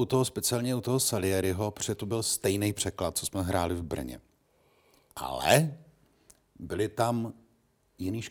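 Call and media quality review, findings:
No audible faults found.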